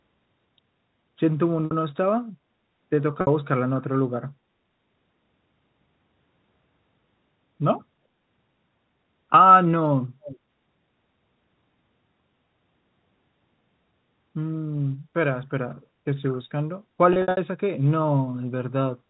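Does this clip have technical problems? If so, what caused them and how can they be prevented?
Yes. Packet loss with pitch repetition occurs at 1.65 to 1.71 s and 3.21 to 3.27 s, each a 60 ms gap, and again from 17.13 to 17.37 s, where 150 ms goes missing in scattered runs no longer than 60 ms. The receiver fills each hole by looping the last pitch period, producing a briefly held, buzzy tone. A steadier network path or a larger jitter buffer with forward error correction would prevent this.

An echo leak appears at 10.22 to 10.39 s: a delayed copy of the speech returns about 356 ms late, at about 15 dB below the direct sound. The likely cause is a loudspeaker at the far end whose echo canceller let part of its microphone pickup through. Using a headset or better tuning the echo canceller at that end would prevent it.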